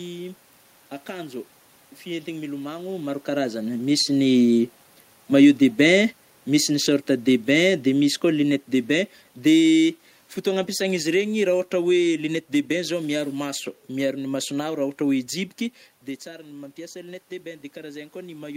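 From 5.74 to 8.61 s the automatic gain is falling: the AGC decided the input was too hot or its background noise too strong, and eased its gain down by about 4 dB. The room noise sinks right along with the voice, which is how you tell it apart from someone just leaning back. It does it again from 9.45 to 12.3 s, about 3 dB this time, just before "de bain zao miaro".

Then at 16.46 s, shortly after the talker seems to move away around 15.5 s, the input drops by about 14 dB, and the automatic gain starts rising to compensate. Voice and background swell up together right through to the end of the clip.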